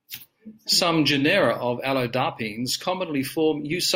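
No faults turn up anywhere in this bit of speech, so there's nothing to flag here.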